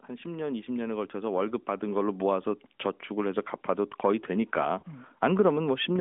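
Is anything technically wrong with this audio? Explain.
Yes, two faults. From 0.07 to 2.56 s there is automatic gain rising. The gain control judged the input too quiet and raised it about 10 dB. Speech and background noise swell together over roughly two and a half seconds, unlike a talker getting louder, which leaves the noise floor unchanged.

From 4.80 to 4.83 s there are lost AMR speech frames. The decoder lacked valid data and patched the gap by reusing the last good pitch and vocal tract settings at reduced gain. This produces a brief dip or warble, which fits one lost 20 ms frame. A dropout in a plain audio stream would instead give a hard silence or click, not a smeared continuation of the sound. The surrounding speech carries the narrowband AMR-NB character, limited to about 200 Hz to 3.5 kHz.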